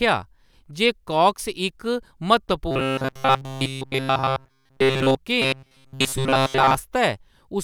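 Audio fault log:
2.71–5.16 s and 5.42–6.75 s: robotic sound from repeated short buffers. The speech becomes a rigid metallic buzz at 133 Hz, fully in the first stretch and partly in the second. This is likely a snippet of about 7.5 ms replayed while late audio is skipped. The steady pitch sets it apart from a stutter or dropout.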